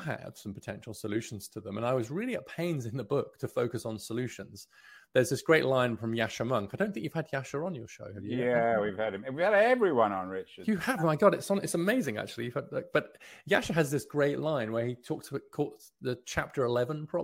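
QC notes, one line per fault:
No technical faults are audible across the whole recording.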